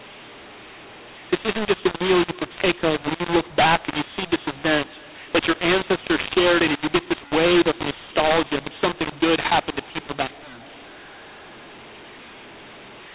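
A mu-law and A-law mix-up runs through the whole clip. The speech was coded as A-law but decoded as mu-law, so sample levels land wrong. Some are too loud, others too soft, and the quietest are lifted above silence. The narrow sub-4 kHz telephone band turns harsh and distorted, and pauses fill with noise.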